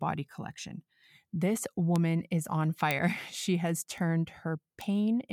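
At 1.96, 2.91, 3.98 and 4.81 s the speech carries a bit error spike: a flipped bit throws one to three samples off by a power of two, giving isolated broadband ticks peaking at about -16, -10, -28 and -16 dBFS. Unlike a dropout or splice click, no audio goes missing.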